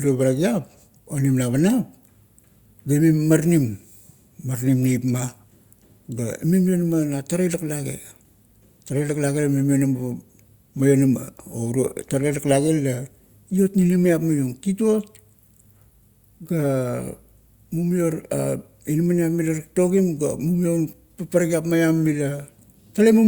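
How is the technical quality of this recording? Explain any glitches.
No technical problems are audible anywhere in this recording.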